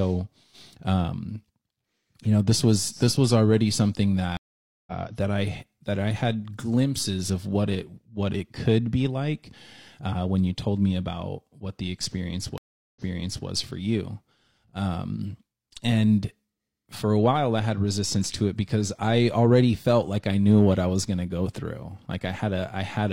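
Stream reconnects at 4.37 s and 12.58 s: after 0.5 s and 0.38 s of silence, a fresh decoder resumes roughly half a second ahead, then 0.51 s back, repeating sound.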